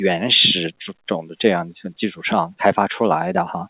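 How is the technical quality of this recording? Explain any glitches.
No glitches or technical faults are audible here.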